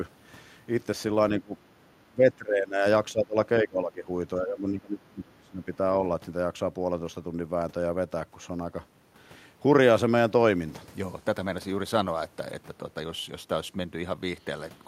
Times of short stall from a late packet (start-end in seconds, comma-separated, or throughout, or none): none